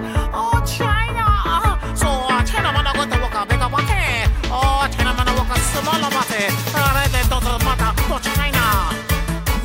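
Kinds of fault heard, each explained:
No faults can be heard anywhere in the clip.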